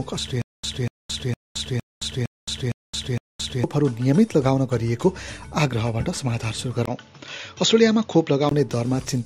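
From 0.42 to 3.64 s, a stutter with silent gaps: a 242 ms burst repeats seven times every 460 ms, separated by 218 ms of digital silence, likely from a stalled player. At 6.86 s, after a 20 ms dropout, the sound turns duller until 8.51 s, with nothing above 7.1 kHz and new noise about 35 dB down at similar level, likely from the input switching to a poorer device.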